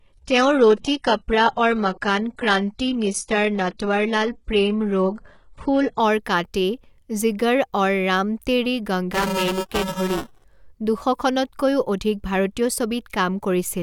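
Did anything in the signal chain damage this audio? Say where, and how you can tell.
Yes. Playback/streaming stage: until 6.0 s, nothing above 11.1 kHz and the sound is smeared, then quality jumps with no gap. That's an adaptive stream starting at a low bitrate, which fits a 12 kbit/s HE-AAC start, and the spectrogram shows an empty top band.

Driver/buffer stage: from 9.13 to 10.44 s, just after "আৰু ৰাম তেৰি", there is a robotic 375 Hz buzz. This is buffer tearing, where about a fifth of each period replays audio a few milliseconds old, which fits a 128-sample buffer. The waveform shows hard steps at every period.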